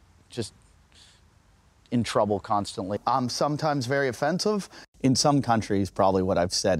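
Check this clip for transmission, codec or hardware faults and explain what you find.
No transmission, codec or hardware faults are audible; the signal stays continuous and stable throughout, with no dropouts, level jumps or added noise to report.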